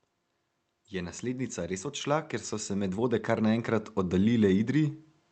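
Speech heard over an Opus call path, band-limited to about 8 kHz, shows automatic gain rising from 0.91 s to 5.03 s: the level climbs by about 8 dB as the gain control, finding the input too quiet, steadily turns itself up. The background noise swells right along with the voice. A speaker moving closer or talking louder would lift only the voice, so the joint rise over those four seconds points to gain control, not the talker.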